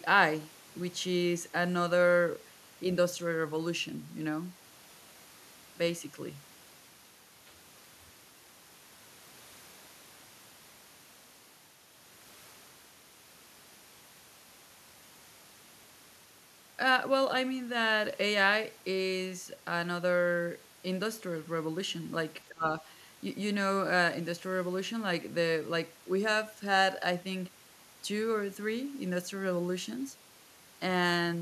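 It's a speech clip, and from 22.46 to 22.84 s the talker dips by about 25 dB in patches, likely speech suppressed in double talk, the echo canceller turning everything down during overlap.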